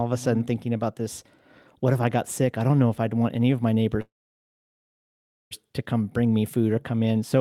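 Right after "want any of my", at 4.01 s, the speech hits a call audio freeze that lasts until 5.53 s. The last sound trails off briefly, then about 1.4 s is just dead air before the talker picks up again with "to come bring me". Nothing seems lost; the speech resumes exactly where it stopped, only 1.5 s later. That points to packets that likely got stuck in transit and drained the jitter buffer.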